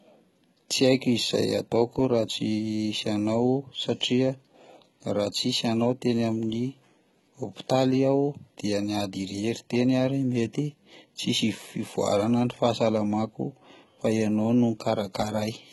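Throughout the speech, the treble is likely rebuilt by HE-AAC compression at a very low bitrate, around 16 kbps. Copied lower bands replace the real highs, cutting off near 11.8 kHz, so harmonics misalign and s sounds turn gritty, metallic and lispy under heavy codec damage.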